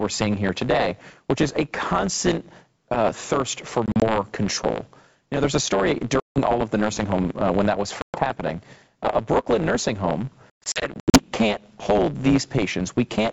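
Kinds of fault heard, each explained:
block size mismatch (truncated): one stage writes longer blocks than the next one reads, so the tail of every block gets dropped. Here that leaves a steady buzz at about 109 Hz the whole way through, and everything runs about 1.09 times fast with the timbre kept.
packet loss on an ADPCM call: lost packets get filled with silence, and the decoder's predictor and step size drift out of step with the sender's. You hear hard-edged holes at about 3.9, 6.2, 8.0 and 10.5 to 11.2 s, the worst 340 ms lost across 640 ms, with the audio coming back slightly distorted before it settles.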